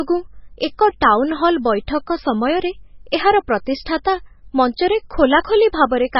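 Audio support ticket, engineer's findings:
Speech watery and swirling across whole clip; hard treble ceiling, nothing above 5.6 kHz. Likely MP3 compression, bit-starved encoder dropping weak frequency bands frame to frame. Swirl separates it from a plain low-pass filter. Heavy damage fits a 16 kbps encode.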